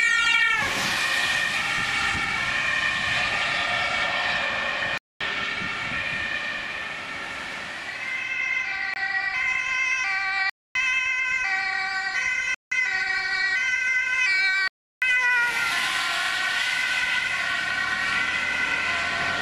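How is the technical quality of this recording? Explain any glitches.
The recording has five blocks of digital silence, at 4.98, 8.94, 10.50, 12.54 and 14.68 s, lasting 228, 23, 256, 171 and 341 ms. The sound cuts out abruptly and returns with no fade. The longer blocks are heard as short holes. The program likely missed its buffer deadline. The 171 and 341 ms lengths fit 8192- and 16384-sample blocks.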